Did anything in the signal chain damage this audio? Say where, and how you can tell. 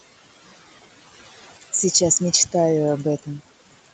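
Yes, in the call processing: you can hear noise suppressor artifacts for the whole clip. The room noise, sitting roughly 18 dB under the speech, gets pulled down by about 15 dB in the gaps and comes back up under the speech, so the background pumps. The suppressor is estimating the steady noise and cutting those bands frame by frame. Nothing reaches above 8 kHz, which fits the Opus band limit.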